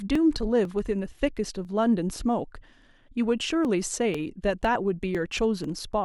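Periodic USB or driver dropouts run from 0.15 s to 5.64 s: something repeatedly stalls the audio path at a fixed interval of 0.499 s, and each time roughly a millisecond of signal is simply skipped rather than padded with silence. Each skip leaves a sudden discontinuity in the waveform, so the speech carries about ten evenly spaced ticks, one every half second, audible only where there is sound to interrupt.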